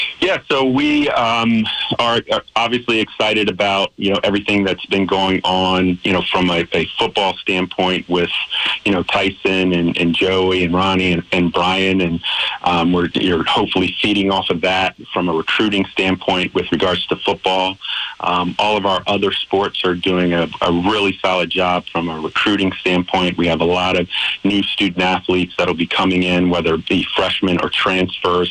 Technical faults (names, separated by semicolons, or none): none